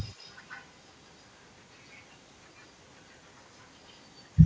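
Echo leak runs from 0.0 to 0.64 s: a faint copy of the speech trails 131 ms behind, about 30 dB down. Quieter scraps follow at 1.91–2.01, 2.58–2.64, 3.6–3.64 and 3.87–3.96 s. The likely cause is loudspeaker sound that the echo canceller failed to remove.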